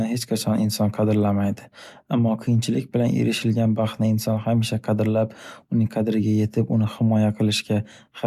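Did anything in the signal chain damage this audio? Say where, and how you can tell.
No, no damage found.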